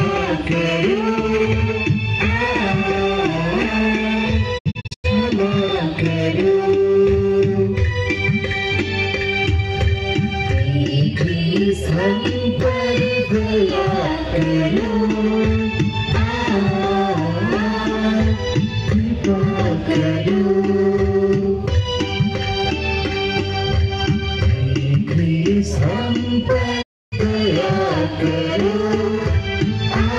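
Digital broadcast dropouts at 4.57 to 5.06 s, where short muted holes totalling 256 ms are scattered across 448 ms, and at 26.81 to 27.14 s: the receiver lost valid frames and faded the audio to silence in 20 ms, losing that material.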